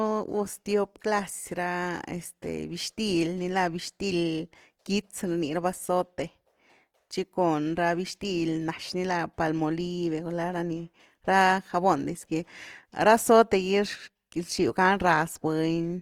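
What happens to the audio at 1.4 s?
At 1.4 s, as throughout the speech, there is Opus compression, likely from a starved music-mode encode that fits about 24 kbps. Bands short of bits are filled with folded or noise content, so the speech sounds rough and grainy, though the bandwidth still reaches 20.2 kHz.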